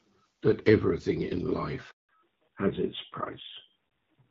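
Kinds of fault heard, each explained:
Low bit depth without dither: grainy distortion runs through the whole clip, and it changes with the speech, roughest on quiet syllables and decays where the level sinks toward a few quantisation steps. The error tracks the signal instead of sitting as a steady hiss, which fits samples likely truncated to about 10 bits with no dither added. The noise floor sits at roughly 40 dB below the speech.
Handover gap: at 1.91 s the speech falls away within a few tens of milliseconds and stays silent for 180 ms, until 2.09 s. This is the call being passed from one network link to another, with no speech frames delivered while the switch completes. Whatever was said in that window is simply gone, not muffled or garbled, and the sound resumes only once the new link carries audio.
Fallback to narrowband: from 2.09 s to the end the sound loses everything above 4 kHz, turning duller and rougher than the first part. 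Before the gap the call ran on AMR-WB HD Voice at 12.65 kbit/s, where speech is clear with only light codec damage. After the handover it continues on AMR-NB at 7.4 kbit/s, whose narrow band removes the crisp upper consonant detail.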